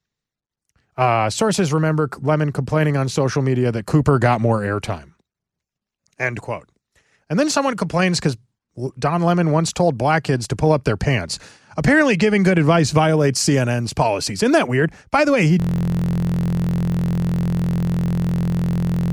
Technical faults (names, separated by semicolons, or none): system hang loop